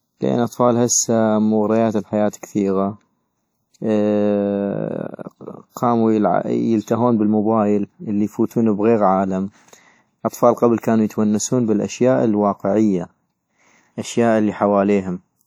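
From start to end the speech has the marks of WMA compression, likely at a low bitrate of around 48 kbps. The long transform blocks smear quantisation noise across tens of milliseconds, so the speech rings and sounds washy, with a hiss that breathes along with it.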